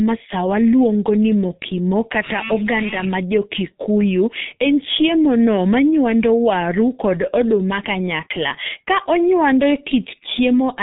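Throughout the speech, the G.723.1 codec leaves nothing above 3.8 kHz, so the sound is muffled. Heavy coding damage makes it hoarse and blurs consonants, since the codec's slowly updated voice model fits a rate near 6.3 kbit/s.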